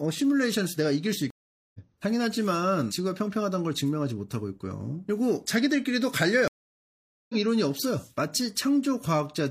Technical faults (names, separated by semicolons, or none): stream reconnect